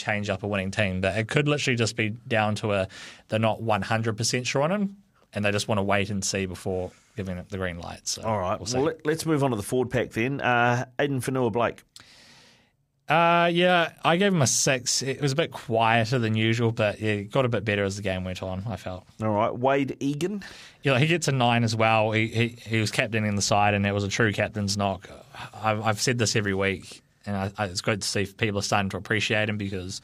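A faint, regular ticking runs under the speech from 0.15 s to 30.02 s, arriving roughly fourteen times a second. These are clock slip clicks, each a single sample dropped or repeated. The likely cause is two unsynchronised devices whose clocks differ by a few hundred parts per million, so the accumulated drift forces a one-sample correction about every 70 ms throughout the clip.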